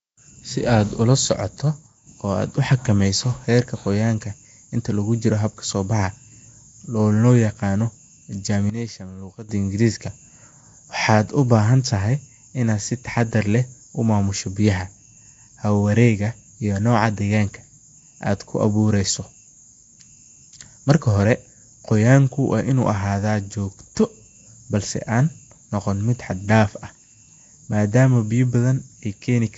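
Right from the start, the whole clip has that rough, hissy halo and underwater smear, and it's plainly audible. That's most likely Nellymoser compression, the old Flash microphone codec. It works in short fixed blocks with very few bits per sample, so weaker bands get nothing and are filled with noise instead. Nothing comes through above 7.7 kHz, and the overall texture fits a rate of around 32 kbps.

At 1.87 s there's a sudden gain jump. The speech and the background noise drop together by about 6 dB in a single step, stay down for roughly 0.2 s, then snap back at 2.07 s. A bigger one hits at 8.70 s, about 12 dB down, and holds until 9.49 s. Both sound like a digital gain change applied instantly with no ramp, likely a level setting or bit shift switching mid-stream.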